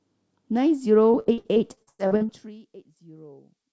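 From 1.12 to 2.31 s the speech breaks up with repeated packet loss, giving a robotic sound. Eleven gaps, the longest about 0.1 s, are patched by stretching the last sound. On a spectrogram this shows as repeated smeared, banded blocks below the 8 kHz ceiling, which fits a G.722 call path, and the waveform shows choppy, repeated segments.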